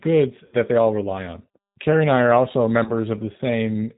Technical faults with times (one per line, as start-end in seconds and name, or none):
0.00-3.98 G.729 codec
0.46-0.55 VoIP packet loss concealed by the speech codec
2.84-2.92 VoIP packet loss concealed by the speech codec